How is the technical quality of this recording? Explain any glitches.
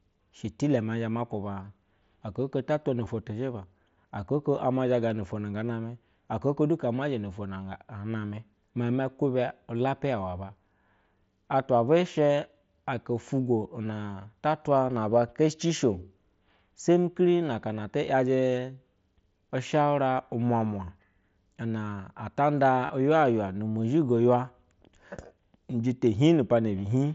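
Three brief dropouts occur, each covered by concealed Bluetooth headset packet loss, over an mSBC wideband link that keeps content up to 8 kHz with light graininess on louder passages. The gaps fall at 3.05 s (15 ms, just before "tizhiba aka oko ama"), at 5.10 s (7.5 ms, right after that phrase) and from 22.86 to 22.90 s (30 ms). Packets between headset and phone were lost, and the receiver filled each gap by repeating the best-matching recent stretch of waveform. The 7.5 ms one is nearly inaudible. The 30 ms gap is long enough to sound like a short buzzy, steady-level tone with a slight warble as the real signal resumes.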